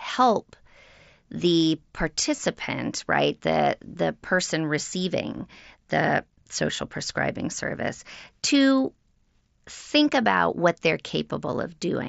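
Concealed Bluetooth headset packet loss occurs at 2.36–2.38 s, about 22.5 ms, and again at 5.37 s, about 15 ms. A few headset packets went missing, and the phone covered each gap by repeating a matching slice of the preceding waveform. Both runs are short, but they show as a buzzy hold at full level with a slight warble on resumption. A dropout would leave silence or a click, so the held tone sets this apart.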